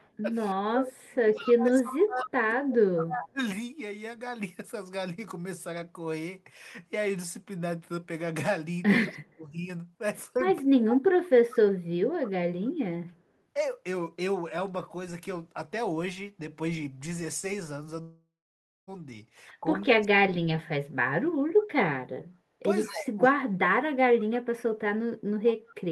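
From 0.0 to 3.01 s, a far-end echo canceller likely fails to remove its loudspeaker pickup, an echo leak: a copy of the speech returns 190 ms late, about 15 dB below it. From 0.54 to 3.4 s, that canceller likely misreads both sides talking at once, causing speech suppressed in double talk. The talker dips by up to about 30 dB in pieces.

From 9.05 to 11.74 s the same double-talk suppression likely recurs, again reaching about 30 dB. The echo leak likely returns with it: a brief scrap from 9.07 to 9.18 s about 25 dB down, then 10.88 to 12.69 s about 15 dB down, both 190 ms behind.

From 18.01 to 18.89 s a long network dropout likely stops packets arriving. About 0.86 s of speech is lost. The last sound is stretched into a fading buzz or hiss, silence follows for about 0.55 s, and the speech resumes past the gap.

From 19.61 to 21.04 s, double-talk suppression likely cuts the speech by up to about 40 dB. 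From 22.85 to 24.35 s it likely does so again, by up to about 40 dB. Over most of that stretch, 22.85 to 24.24 s, a faint echo leak likely sits about 30 dB down, 190 ms late.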